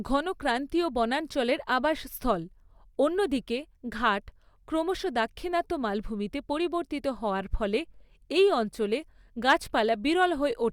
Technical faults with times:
9.49-9.53 hard clipping
10.22 hard clipping

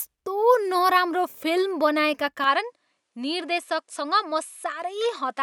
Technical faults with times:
2.44-5.42 input switched to a poorer device

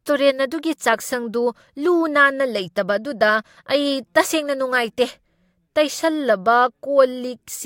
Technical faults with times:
none

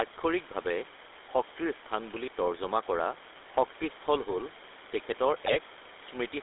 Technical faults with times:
0.00-6.42 GSM full-rate codec
5.46-5.58 GSM bit errors

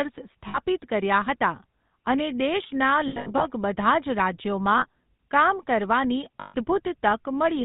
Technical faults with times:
0.00-7.65 GSM full-rate codec
0.48-0.59 lost GSM frames
3.08-3.46 lost GSM frames
4.78-4.86 lost GSM frames
6.40-6.55 lost GSM frames

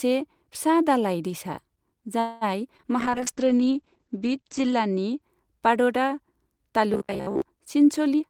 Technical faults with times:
2.19-2.44 call audio freeze
2.77-2.86 short concealed packet loss
2.94-3.56 jitter buffer slow-down
3.03-5.28 call bitrate drop
6.94-7.42 robotic sound from repeated short buffers
8.14-8.30 jitter buffer speed-up

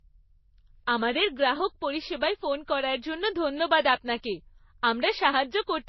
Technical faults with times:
0.00-5.88 transcoding between lossy codecs

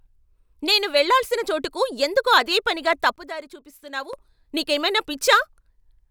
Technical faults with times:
3.16-4.13 sudden gain jump

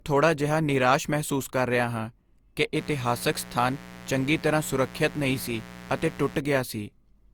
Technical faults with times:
0.00-7.33 generation loss
2.76-6.40 mains buzz

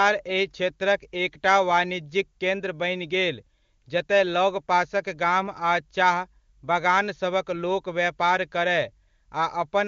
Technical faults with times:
none

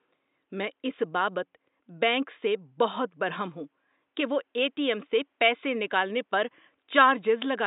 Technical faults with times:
none

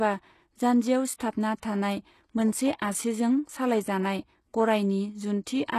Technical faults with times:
0.00-5.79 HE-AAC compression
1.17-1.20 pre-echo

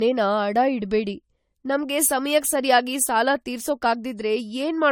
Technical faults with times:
0.00-4.92 generation loss

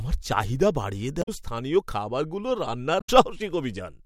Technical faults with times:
1.19-1.29 damaged data in a compressed stream
2.97-3.10 damaged data in a compressed stream

